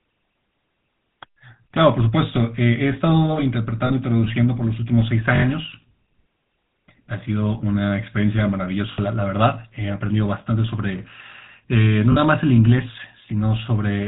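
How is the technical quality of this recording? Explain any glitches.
The speech is clearly degraded throughout by a low-rate phone codec, and there are three short dropouts.

Across the whole 14-second recording the speech has a buzzy, gravelly roughness and a muffled top, with nothing above 4 kHz. That points to the GSM full-rate codec at 13 kbps. It rebuilds speech from a vocal-tract filter excited by a pulse train that keeps only one sample in three, so fine detail is lost and replaced with a coarse, grainy texture. The damage is plainly audible.

At 3.86 to 3.92 s, 8.92 to 8.99 s and 12.12 to 12.17 s, the sound briefly freezes into a rough, metallic ring. These are lost GSM frames. Each time, the decoder held onto the parameters of the last intact frame and replayed them. The gaps are about 40 ms, 60 ms and 40 ms long, which fits two, three and two missing 20 ms frames.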